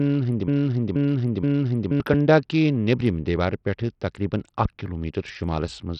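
Broken-record loop, 0.0 to 2.0 s: already under way when the clip begins, a 0.48 s fragment of the speech repeats exactly, back to back, three times. The likely cause is a stalled player or stream resending its last buffer, so the speech meant for those two seconds is lost.

Bluetooth SBC compression, throughout: nothing is heard above 14.5 kHz, the remaining treble flickers, and a gritty, coarse noise rides on the speech. The damage is heavy and fits a low bitpool near 64 kbps, likely from SBC starving its upper sub-bands of bits.

Loud pop, 4.65 to 4.68 s: a single sharp pop, about 10 dB above the speech, lands on top while the speech continues beneath it. A sudden voltage step, likely from a plug, switch, static discharge or driver glitch, was added to the signal.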